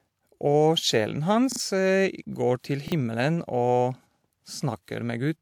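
Speech, with two kinds of fault. A repeated buffer at 1.52–1.60 s and again at 2.88–2.92 s makes the same 40 ms fragment sound over again, twice in the first case and once in the second, with hard joins that fit late-arriving audio. Because the sound repeats rather than going silent, it is a stutter and not a dropout. Pre-echo at 2.60–2.64 s puts a brief hiss, about 40 ms long, just before an attack, smearing its onset. The noise comes before the sharp sound, not after, which separates it from echo or reverb.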